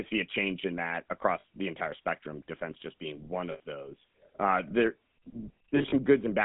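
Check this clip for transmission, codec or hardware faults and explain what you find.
The clip has two faults: GSM full-rate coding throughout and three short bursts of lost GSM frames.

GSM full-rate codec, throughout: The speech passed through a GSM full-rate codec, consistent with a 13 kbps link. It models the vocal tract and drives it with regularly spaced pulses, keeping only every third excitation sample. The band runs 150 Hz to 3.6 kHz, and the voice has a plainly audible buzzy, gravelly roughness.

Lost GSM frames, at 1.4 to 1.44 s between "a change in that" and "the entire spectrum defense"; at 3.52 to 3.6 s just after "defense just being one"; and at 5.76 to 5.94 s: The decoder replaced missing frames by repeating the last good frame's settings. The first gap is 40 ms, fitting two 20 ms frames, and the second is 80 ms. The third scatters 80 ms of loss over 160 ms, with the longest run around 40 ms. 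Each is heard as a brief rough, metallic ring that holds the sound in place.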